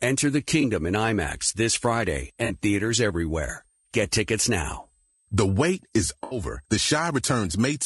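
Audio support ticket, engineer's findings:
Switching supply whistle, whole clip. A switching supply in audible burst mode or beating with a second converter. High whistle at 8.1 to 8.9 kHz, wandering within that band, roughly 45 dB below the speech.

Low-delay AAC compression, whole clip, likely AAC-ELD at a low rate, around 32 kbps. Short low-delay frames resolve the voice harmonics poorly. Speech rough and grainy, noise filling gaps between harmonics, top band dull or synthetic. Damage plainly audible.

AAC frame loss with concealment, 0.61 to 0.65 s. One lost frame, about 20 ms, filled in by the decoder from the last good spectrum. Brief smeared, noisy blip.
Same fault, 2.45 to 2.51 s. About 40 ms, fits two consecutive frames. Longer phasey, noisy smear.
Same fault, 6.23 to 6.37 s. About 80 ms, fits four frames. Concealment stretched furthest here. Smeared, washy patch.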